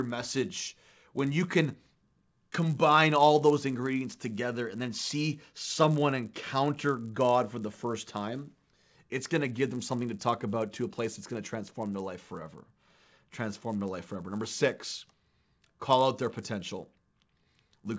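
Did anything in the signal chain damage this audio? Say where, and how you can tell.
Yes: the resampler restarted on every 10 ms block. Edge errors buzz at 100 Hz only under speech, showing as vertical spectrogram stripes every 10 ms.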